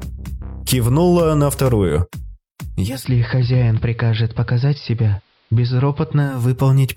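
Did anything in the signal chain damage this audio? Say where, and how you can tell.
Yes. The damage happens upstream of any recording chain, in a hybrid radio receiver: digital radio blending to analogue. At 2.75 s the receiver loses the digital stream and cross-fades over about 0.33 s to the station's AM broadcast, staying there until 6.50 s. On a spectrogram the top of the spectrum narrows to AM bandwidth and a faint hiss floor, roughly 40 dB below the signal, fills the band. The waveform drops in level by about 1 dB.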